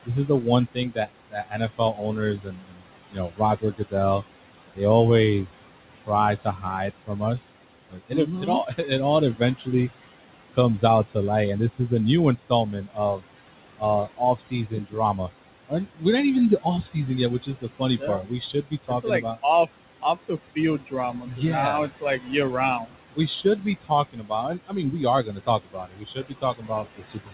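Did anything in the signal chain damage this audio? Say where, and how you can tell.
Yes. The damage is in the call-processing stage: the noise suppressor cuts every band it judges to be steady noise by about 18 dB, frame by frame. The room noise, about 15 dB under the speech, sinks between phrases and swells beneath them.

The same noise suppressor also cut parts of the speech, dropping them by about 17 to 19 dB at 0.05–3.94 s, 5.46–9.68 s, 10.53–11.16 s before "light and this", 11.77–13.24 s after it, 13.78–16.03 s, and from 16.62 s, after "even the", to the end. Soft consonants and word endings sound swallowed.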